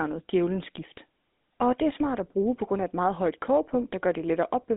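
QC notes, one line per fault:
Throughout, GSM full-rate codec: speech is held to roughly 200 Hz–3.6 kHz and carries a buzzy, gravelly roughness from coarse pulse excitation, fitting 13 kbps, unlike clean band-limiting.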